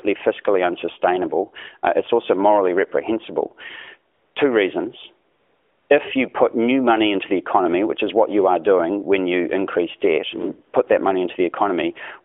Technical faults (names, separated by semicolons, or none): AMR comfort noise